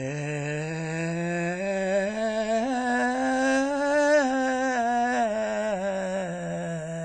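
From the first second to the last, the music carries plainly audible WMA compression damage, most likely from a low-rate transform encoder around 32 kbps. Nothing survives above 10 kHz, so the top end sounds dull and closed in. Long transform blocks smear quantisation noise across tens of milliseconds, giving attacks a ringing, washy edge, and a hiss rises and falls with the music, while weak spectral lines are zeroed out.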